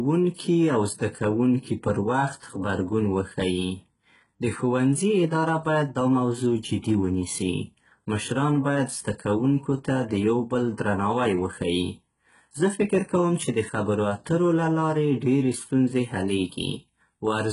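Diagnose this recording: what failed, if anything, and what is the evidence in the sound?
The failure is at the codec stage and runs throughout the speech. Sibilants sound gritty and metallic, with a hard ceiling at 11.1 kHz. This is likely heavy HE-AAC compression, fitting roughly 12 kbps, whose band replication copies lower bands upward. A spectrogram shows repeated, misaligned high-band patches.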